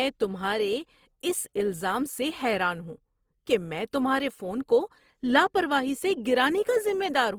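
Throughout the speech, the signal has likely gone through Opus compression in its music mode at a rate that fits about 24 kbps. Bands short of bits are refilled with folded or noise content, so the speech turns plainly rough and grainy while keeping full bandwidth.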